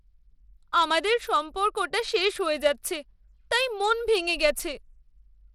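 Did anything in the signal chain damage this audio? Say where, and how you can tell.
Yes. Bluetooth SBC compression, throughout the speech at the codec stage: nothing above 17.1 kHz, with plainly audible grit and flickering treble, likely from a starved bit pool, which fits roughly 96 kbps.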